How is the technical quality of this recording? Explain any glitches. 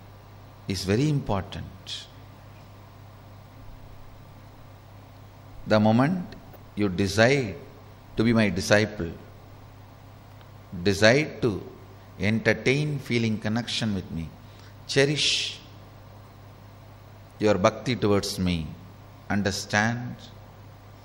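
Two short glitches spoil the recording, both DAB burbling. Weak reception let bit errors slip past error correction into the MP2 data, corrupting samples over what sounds like a few frames. From 6.53 to 6.56 s and at 11.67 s, short blips of noise appear in single sub-bands over the sound.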